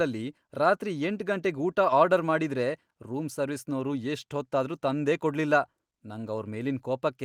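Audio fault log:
Nothing to log here: this bit of speech comes through without a single fault turning up anywhere along the way.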